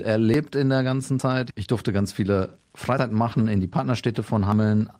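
Dropped buffer (overrun) skips come at 0.34 s, at 1.20 s just after "in der ganzen", and at 2.99 s just after "durfte ganz viele". At each, the sound jumps forward by about a tenth of a second, with no silence. The likely cause is samples being overwritten before the program read them, so the two edges butt together.

A lost packet rebuilt from error correction runs from 3.32 to 3.42 s, just before "in die". Three separate lost packets were replaced with low-bitrate backup copies, so there is no gap, but that stretch sounds rougher and noisier.

One more dropped buffer (overrun) skip comes at 4.52 s, with the same abrupt skip of about a tenth of a second.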